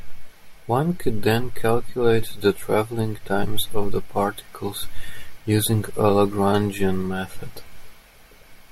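No technical faults can be heard anywhere in the speech.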